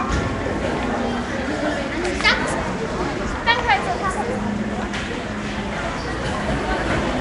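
From start to finish the sounds carry a rough, hissy halo and a smeared, underwater blur, with plainly audible coding damage and nothing above about 10.6 kHz. The likely cause is Nellymoser compression, the old Flash microphone codec, here at a rate that fits roughly 44 kbps. It spends a fixed few bits per sample and fills starved bands with noise. That noise fill separates it from low-bitrate MP3, whose gaps sound watery and swirly rather than hissy.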